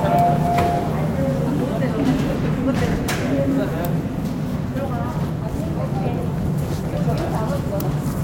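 At 2.35, 4.75 and 7.69 s, compressed frames are skipped. Whole frames never reach the output, so the sound jumps forward by roughly 100 ms, 200 ms and 70 ms.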